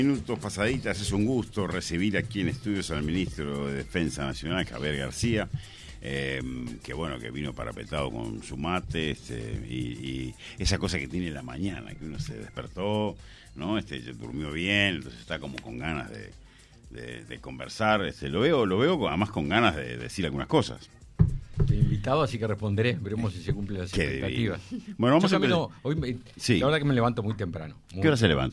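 No technical faults can be heard anywhere in the recording; the signal holds steady and intact throughout.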